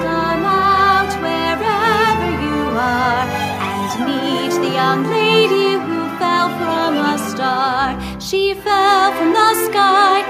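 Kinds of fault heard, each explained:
No kinds of fault are heard in this clip.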